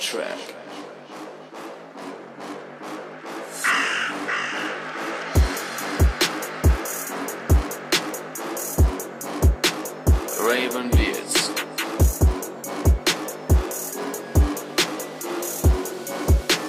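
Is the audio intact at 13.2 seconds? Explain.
Yes, at 13.2 seconds the audio plays through cleanly, with no dropout, click, distortion or other fault at that moment.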